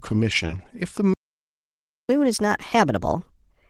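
At 0.47 s the speech shows short concealed packet loss, with the disturbance settling by 0.58 s. About 20 ms of audio failed to arrive, and the decoder covered the gap by extending the preceding sound for roughly 13 ms before easing back into real signal, adding a little time overall. It is heard as a brief smear or wobble rather than a hole. That sets it apart from a dropout, which would leave true silence or a hard click.

From 1.14 s to 2.09 s comes a playback stall. The output simply goes silent for about 0.96 s in the middle of the flow, likely because the player ran dry of buffered data or its thread was held up. Unlike concealment, nothing is synthesised to bridge the gap. The silence is long and clean, and the sound then resumes rather than being smoothed over.

Immediately after, from 2.09 s to the end of the clip, there is catch-up at higher speed. The player works through its backlog 1.25 times faster by resampling, so the speech is both quicker and higher, raised by about four semitones. 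Because tempo and pitch rise together, this differs from a deliberate pitch shift, which would change pitch without changing pace. Its placement right after the silence ties it to the stall.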